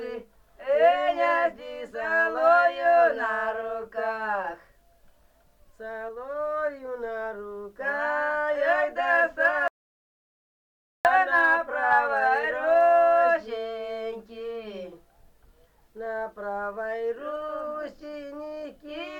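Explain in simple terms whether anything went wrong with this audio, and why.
Something went wrong at 9.68 seconds. The sound cuts out completely and returns at 11.05 seconds. That is an audio dropout to silence, about 1.4 seconds long. Even the background room sound disappears. The likely cause is a lost input, so nothing was captured.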